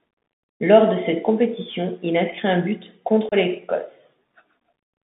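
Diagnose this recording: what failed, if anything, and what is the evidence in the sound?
The speech passed through a Bluetooth CVSD headset codec. The damage is plainly audible throughout. The band runs from about 150 Hz to 3.6 kHz, so nothing bright survives above that. S sounds come out scratchy. A granular hiss sits under the speech. Loud, bright syllables distort where the one-bit delta modulator's step cannot keep up with the waveform. This fits a 64 kbps CVSD link between headset and phone.

There is also unconcealed Bluetooth headset packet loss on the wireless link, from 3.29 to 3.34 s. About 30 ms of speech drops out, which points to a few lost packets in a row. Nothing fills the hole. The gap has hard edges. The speech then returns briefly quieter, as the CVSD decoder's step size rebuilds after the silence or idle pattern that replaced the missing audio.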